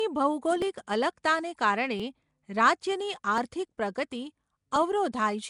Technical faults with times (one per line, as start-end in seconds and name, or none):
0.00-5.50 Nellymoser compression
0.62-4.76 clock drift buffer slips